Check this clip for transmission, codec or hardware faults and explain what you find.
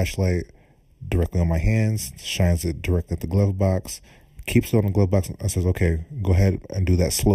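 One fault is present throughout the speech: channel delay (comb filtering). One channel lags the other by under half a millisecond, so summing to mono cancels shared content at evenly spaced frequencies, starting near 1.5 kHz. The speech sounds hollow and phasey, and because the notches stay fixed, unlike a sweeping flanger, it points to a static offset.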